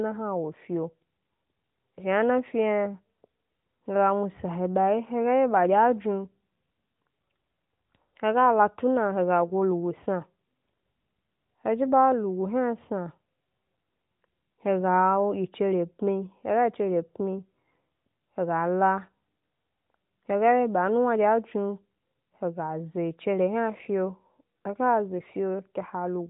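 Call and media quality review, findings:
No findings from the call and media quality review of this speech.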